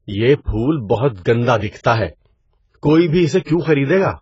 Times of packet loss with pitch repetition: none

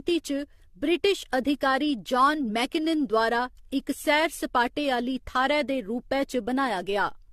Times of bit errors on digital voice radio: none

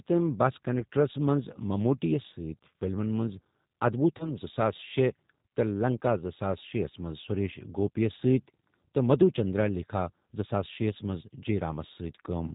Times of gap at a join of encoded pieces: none

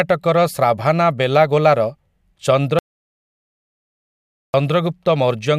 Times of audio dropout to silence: 2.79-4.54

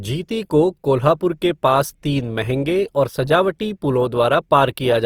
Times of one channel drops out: none

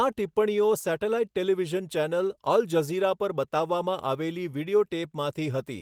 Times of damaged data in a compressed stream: none

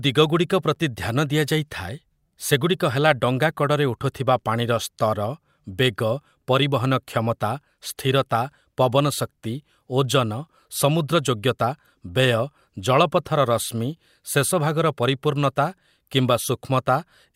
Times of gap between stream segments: 0.75, 12.76

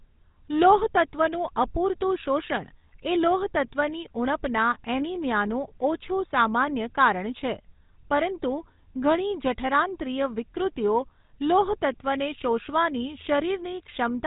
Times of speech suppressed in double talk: none

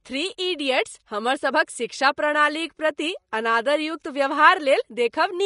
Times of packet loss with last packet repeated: none

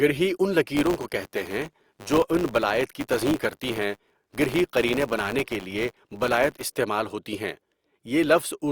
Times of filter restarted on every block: 0.75-6.75

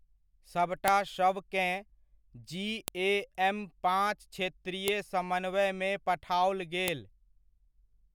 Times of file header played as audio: 0.88, 2.88, 4.88, 6.88

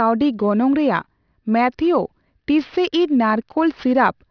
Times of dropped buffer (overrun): none

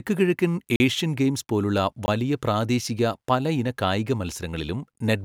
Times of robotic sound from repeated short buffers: none

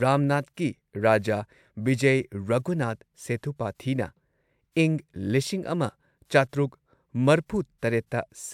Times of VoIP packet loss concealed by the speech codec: none

